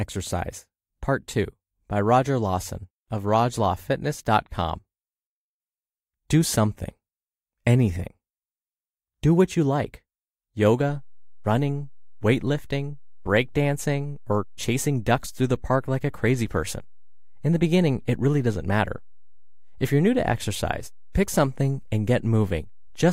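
A single low thump lands at 10.89 s, and the speech carries on through it unaltered to the end of the clip. This is a DC step: the waveform's zero line jumps by about -37 dBFS at that instant and stays offset for the remainder. The abrupt shift in baseline is what produces the thump, as when a converter recalibrates or an input carrying an offset is switched into the path.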